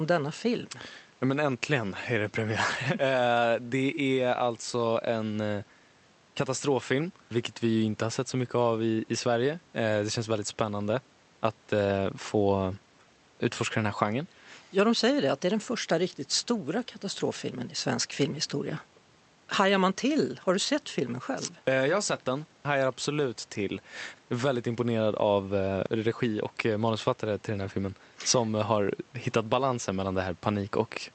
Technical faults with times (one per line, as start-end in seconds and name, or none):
none